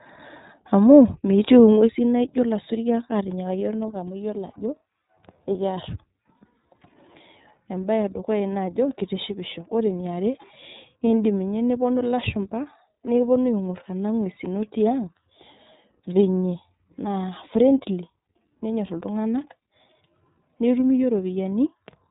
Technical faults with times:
0.00-22.10 iLBC codec

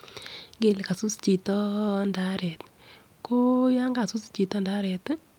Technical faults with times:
none

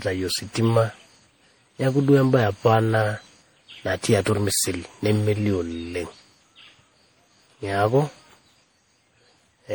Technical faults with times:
0.00-9.74 generation loss

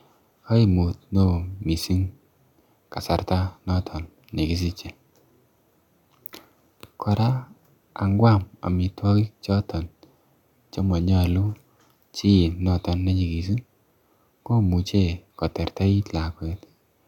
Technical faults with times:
none

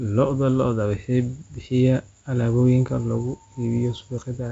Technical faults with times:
none

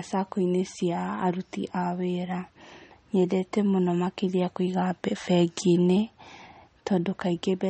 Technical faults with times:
0.00-7.70 MP3 compression

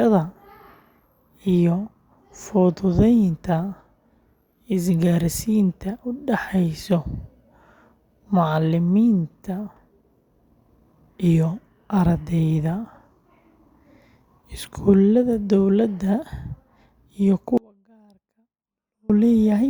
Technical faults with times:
17.57-19.10 audio dropout to a faint residue

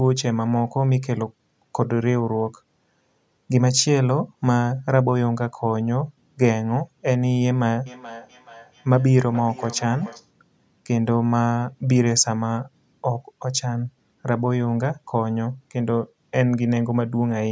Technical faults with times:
7.86-10.33 feedback echo between two devices

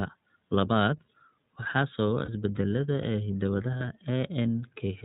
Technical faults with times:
0.00-5.05 iLBC codec
2.25-2.29 lost iLBC frames
3.03 repeated buffer
3.78-3.81 lost iLBC frames

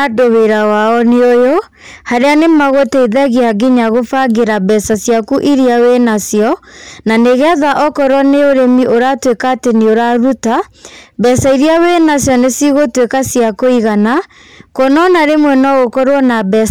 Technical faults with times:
0.00-16.70 hard clipping

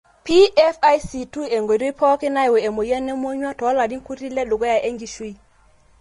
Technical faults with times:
0.00-6.00 Vorbis compression

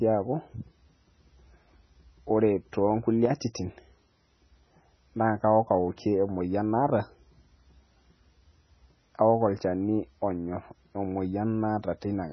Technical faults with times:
0.00-12.33 MP3 compression

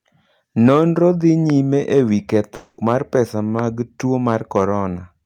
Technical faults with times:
0.65-0.80 hard clipping
1.50-1.52 loud pop
1.97-3.20 hard clipping
2.55-2.79 long network dropout
3.59-3.61 loud pop
4.28-4.64 hard clipping

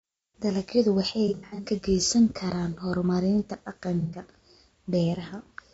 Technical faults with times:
0.00-5.74 low-delay AAC compression
1.28-1.66 AAC frame loss with concealment
4.01-4.21 AAC frame loss with concealment

